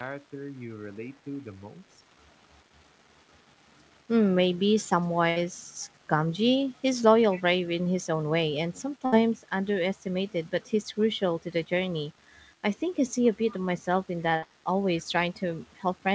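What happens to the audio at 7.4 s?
Right around there, from 7.31 to 7.42 s, there's a short scrap of echo leak. A faint delayed copy of the speech trails about 251 ms behind the original, sitting roughly 20 dB down, so it's a quiet ghost rather than an obvious repeat. The likely cause is a loudspeaker on the far end whose echo canceller didn't fully scrub what its mic picked up, so a bit got sent back.

That same moment also carries the graininess that runs through the whole clip: low bit depth without dither. The quantisation error tracks the signal, so quieter stretches, including that faint echo tail, turn gritty and crunchy instead of hissy. The noise floor sits about 35 dB below the speech, which points to something like 9-bit resolution, likely rounded without any dither. It all rides on top of the call band, which stops at 8 kHz.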